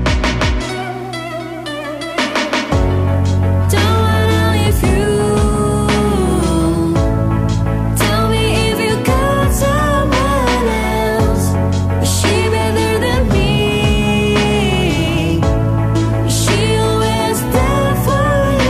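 From 0.93 s to the end, video or display buzz intrudes: a 60 Hz field-rate buzz with hash above it, well below the audio, showing as stacked harmonic lines on a spectrogram.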